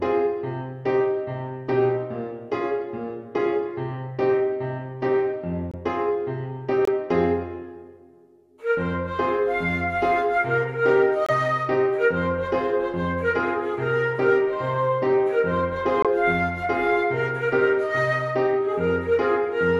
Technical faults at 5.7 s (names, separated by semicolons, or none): corrupt frame muted